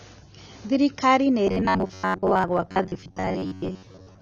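A speech clip with dull, smeared sound throughout. The texture is fizzy and warbling. This is likely AAC compression at a low bitrate. From 1.47 s to the end, the sound becomes a rigid metallic buzz at 93.8 Hz. This is likely robotic sound from repeated short buffers: roughly half the audio is replaced by repeats of a 10.7 ms slice.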